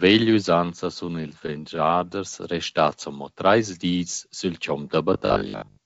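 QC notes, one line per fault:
1.06–2.13 s, repeated stalls (stutter): eleven tiny hiccups, longest about 14 ms, adding up to 134 ms, roughly 12% of that stretch, with nothing actually lost. Packets kept arriving late, so the last sound got stretched each time before it resumed, just ahead of "restats amo trais dis".
5.14–5.84 s, robotic sound from repeated short buffers: right after "dis sül chomp da" most of the tail turns into a stiff, metallic buzz pinned at 50 Hz. That pitch fits a 20 ms chunk being looped, likely because fresh audio was arriving too rarely.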